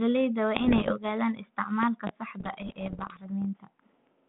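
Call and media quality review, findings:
Bit errors on an ADPCM link, 0.56–0.92 s and 2.40–3.25 s. Pops and rough, gritty bursts with brief level jumps, at roughly 1 percent then slightly fewer errors. Each corrupted code word also throws off the decoder's step size and predictor, so the damage rings on for milliseconds.

Loud pop, 1.83–2.11 s: two sharp pops, about 15 dB above the speech, which continues underneath. 3.42 s: single pop, about 10 dB up. Likely a voltage step or pulse from a connector, switch, static or driver glitch, shaped by downstream circuitry.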